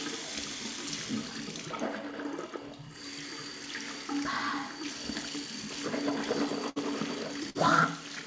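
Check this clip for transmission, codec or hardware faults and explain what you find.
Two bursts of packet loss, at 6.70 to 6.78 s and 7.50 to 7.57 s. Each time, consecutive packets failed to arrive, so the receiver stretched the last audio for about 60 ms and then 50 ms as a fading hiss or buzz. It then jumped ahead, dropping roughly 60 ms and 40 ms of the sound. The call path's band limit, with nothing above 8 kHz, fits a G.722 wideband codec.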